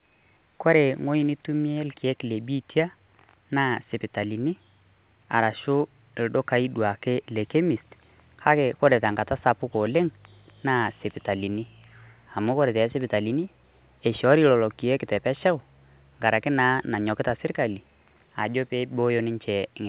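Speech recording with no technical faults to report.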